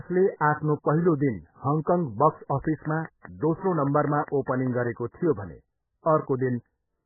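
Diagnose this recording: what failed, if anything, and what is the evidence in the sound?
Codec stage: likely MP3 compression at a very low bitrate, near 8 kbps. Nothing survives above 2.1 kHz, and the heavy, watery swirl sets it apart from a plain low-pass filter.

Analogue wiring or power: a train of clicks from 2.65 to 4.88 s, about ten regular pulses at roughly 5 per second and about 10 dB above the speech. Their near-identical shape and steady pace set them apart from codec artefacts, likely interference or a faulty connection.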